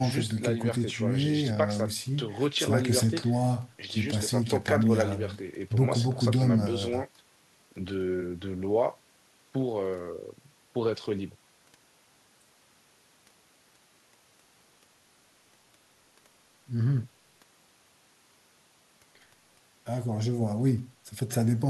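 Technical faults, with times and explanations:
No technical faults are heard in this speech clip.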